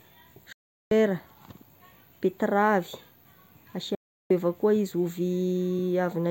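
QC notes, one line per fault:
0.52–0.92 s, digital broadcast dropout: speech fades to silence within a few milliseconds for 0.38 s, then returns. The receiver muted on corrupt or missing frames, so that stretch is gone.
3.95–4.31 s, digital broadcast dropout: another near-instant fade to silence, lasting 0.35 s. The receiver again muted until valid frames resumed, and the missing stretch of speech is gone.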